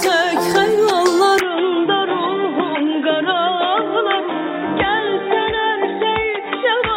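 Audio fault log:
1.39–6.97 s, input switched to a poorer device: at 1.39 s the sound abruptly turns duller and boxier, with nothing above 3.8 kHz from there to the end. There is no gap at the change. The level drops by about 5 dB and a faint new noise floor appears, far below the signal. This is likely the recording jumping mid-take to a narrower-band microphone or headset call profile with its own tone, gain and background noise.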